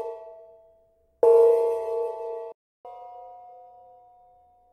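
At 2.52 s the audio halts in a playback stall: about 0.33 s of full silence before it resumes. The likely cause is the player running short of data or its thread being blocked. Unlike a dropout, which is a brief hole inside ongoing sound, this is a clean freeze in mid-flow. From 2.85 s to the end comes catch-up at higher speed, with the backlog resampled at 1.1 times normal. Speed and pitch rise together by roughly a semitone and a half. That coupling, and its onset right after the stall, set it apart from a time-stretch, which would keep the pitch steady.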